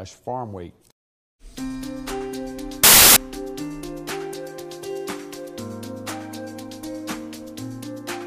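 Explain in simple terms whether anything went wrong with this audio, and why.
From 2.84 to 3.16 s the sound turns into a loud burst of harsh noise: samples built from the wrong bytes. The player misassembled each sample's bytes, so tiny details became huge values. Unlike ordinary background hiss, it is sudden and loud.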